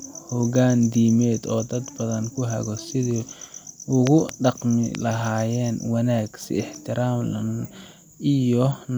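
A speech clip with loud pops: two in quick succession between 4.07 and 4.31 s, then one more at 4.95–4.97 s, each peaking well above the speech, which carries on underneath. They show as tall, narrow spikes on the waveform and thin vertical stripes spanning all frequencies on a spectrogram, likely from a sudden electrical pulse such as a plug, switch or static discharge.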